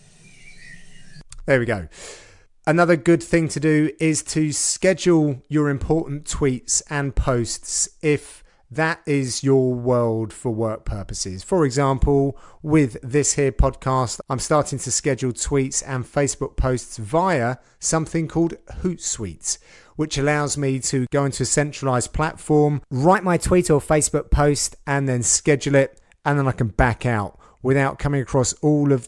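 From 23.15 to 24.86 s the speech is played at the wrong sample rate, with audio captured at 22 kHz running out at 24 kHz without conversion. Speed rises by 1.09 times and pitch by about 1.5 semitones together, so the voice sounds slightly high and hurried.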